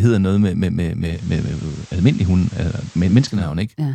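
Just after "noget med med med", at 1.00 s, the digital radio starts blending to analogue. The receiver has lost its digital stream. It cross-fades over 351 ms to the FM broadcast of the same station. Hiss comes up, roughly 30 dB below the signal. The level also shifts by about 3 dB. At 3.55 s it blends back to digital, and the hiss clears.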